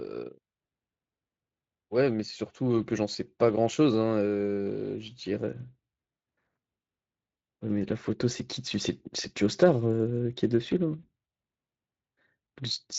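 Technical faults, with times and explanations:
Throughout: Speex codec. The speech carries plainly audible coding damage, a hoarse, noisy grain laid over the voice, at a rate that sounds like roughly 20 kbps. Speex is a CELP coder, so it rebuilds each stretch of speech from a filter plus an excitation signal, and when the excitation is short on bits the fine detail gets swapped for noise-like texture. That's the roughness you hear riding on every phrase.
10.99 to 11.09 s: VoIP packet loss concealed by the speech codec. About 40 ms of audio never arrived, which fits two lost frames, and the decoder covered the gap by carrying its last pitch and filter forward while turning the level down. So the voice smears into a short, fading stretch of extrapolated sound instead of a hard dropout. Because each decoded frame leans on the one before, it stays a bit thin and off for a moment after the stream picks back up.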